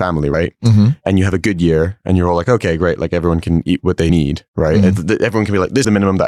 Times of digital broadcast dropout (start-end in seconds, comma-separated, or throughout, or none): none